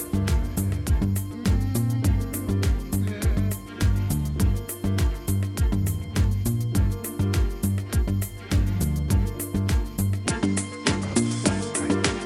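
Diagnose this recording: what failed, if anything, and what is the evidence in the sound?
From 10.27 s to the end, nothing remains above 10.6 kHz and a new noise floor sits around 30 dB under the signal, with no gap or level jump. This is likely an input switched to a poorer device at the driver stage, with a narrower band and its own noise.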